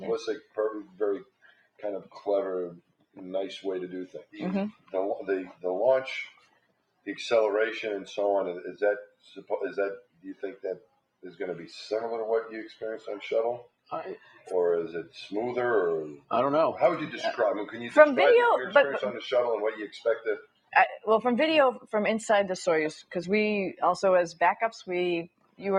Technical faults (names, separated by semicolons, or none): noise suppressor applied to music or sounds; sound cut by the noise suppressor